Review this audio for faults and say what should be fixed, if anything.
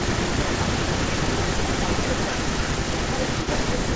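Channel delay (comb filtering) runs through the whole clip. One channel trails the other by roughly 10 ms, so the mono sum cancels near 50 Hz and at every 100 Hz above it, giving a hollow, phasey tone. A spectrogram shows evenly spaced dark horizontal notch lines. Align the channels before summing, or keep only one.

Echo leak is present from 0.00 s to 3.96 s. A copy of the speech returns 299 ms later, only about 5 dB quieter, likely because a loudspeaker's output reached the far-end microphone and its echo canceller failed to remove it. The waveform shows speech bursts repeated, slightly weaker, 0.3 s behind. Use headphones at that end or retune its echo cancellation.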